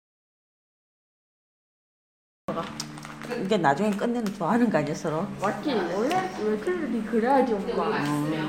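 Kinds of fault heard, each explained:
Audio dropout to silence, 0 to 2.48 s: the clip opens in the middle of a gap that is already under way, with silence and no trace of room tone or background. The sound then arrives abruptly at 2.48 s, mid-flow rather than with a natural onset. The likely cause is a lost input, such as a disconnected device, a failed link or a mute, while recording carried on writing silence, so whatever occurred in that opening stretch is gone.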